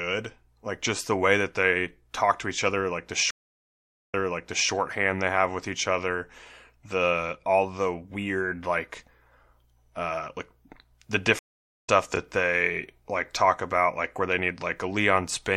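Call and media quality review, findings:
Stream reconnect, 3.31–4.70 s and 11.39–11.90 s: dropout after "each other like the", 0.8 s silence, then about 0.6 s replays before "they have with each". Second: 0.44 s gap, skips roughly 0.2 s ahead. Connection loss, decoder restarted mid-stream.

Chunks out of order, 12.14–12.18 s, just before "they like talk about": brief jumbled moment. One 20 ms chunk played a chunk late; buffer/write ordering.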